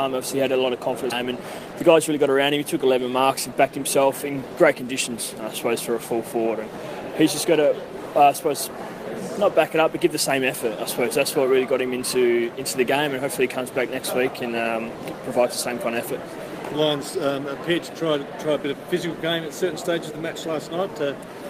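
A skip ahead at 1.11 to 1.13 s drops roughly 0.7 s of audio. The receiver discarded that stretch, most plausibly in transit or through a jitter buffer overflow, while later audio was already queued. Playback leaps forward with no filled gap, and the two sides are spliced almost directly.

Jitter buffer speed-up follows from 1.23 to 2.30 s. The receiver held more audio than its target and trimmed short pitch-period pieces repeatedly, removing roughly a tenth of a second in all. The sound plays about 10 percent fast at unchanged pitch and feels hurried.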